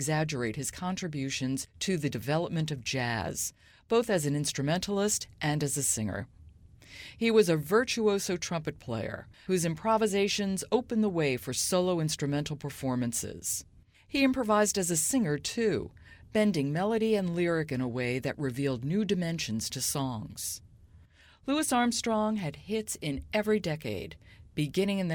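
Nothing in this speech recording stands out as a technical fault, so there's nothing to flag here.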